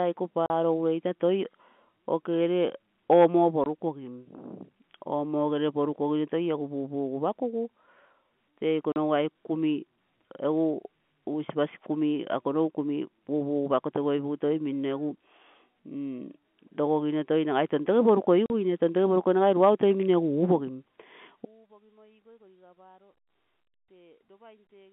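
Packet loss filled with silence punches hard-edged holes at 0.46 s before "weitoi toi", 3.64 s after "okegere omo", 8.92 s before "aike kumi", and 18.46 s. The holes last 40, 20, 40 and 40 ms, fitting 20 ms packets. Each shows as a flat-line waveform gap and a blank spectrogram column.

From 21.45 s to the end comes an audio dropout to a faint residue, likely a lost input with the path still live. The sound collapses abruptly to a faint remnant roughly 30 dB down, seen as a sudden drop in waveform height and a dimmed spectrogram, all within the telephone band.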